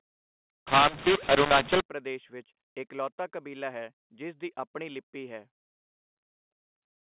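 From 0.67 to 1.81 s the speech turns harsh and gritty: the G.711 telephone signal, encoded as mu-law, is being decoded as A-law, the two laws mixed up. Because the two logarithmic curves disagree, sample levels are remapped wrongly, some inflated and others shrunk, and near-silent samples jump well above zero, so low-level passages fill with noise. Normal band-limited telephone sound, with nothing above 4 kHz, returns at "ਪ੍ਰਦੇਸ਼ ਵਿੱਚ ਇਕਲੌਤਾ ਕਬੀਲਾ".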